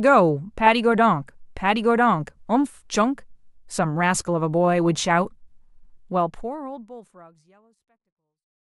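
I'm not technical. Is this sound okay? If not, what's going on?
Yes, nothing here sounds wrong with the recording. Toward the end the speech gets a smooth fade, easing out from around 6 seconds until it's gone, which is a normal, deliberate way to finish a clip.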